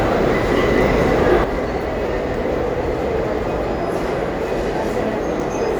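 An everyday-sounds recording with a sudden gain jump at 1.44 s: the level drops by about 6 dB in a single step and stays down to the end, background included. That's likely a gain setting or bit shift applied instantly, with no ramp.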